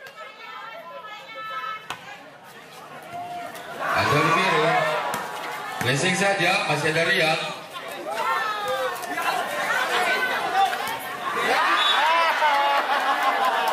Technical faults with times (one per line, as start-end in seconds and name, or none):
none